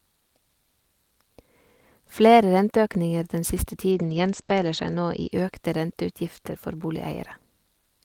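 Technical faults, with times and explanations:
3.93–5.37 s, call bitrate drop: after "den siste" the speech turns coarse and muffled, with content above 8 kHz gone, consistent with the encoder falling from about 32 to 13 kbps for roughly a second; full bandwidth returns by "økte renteutgifter".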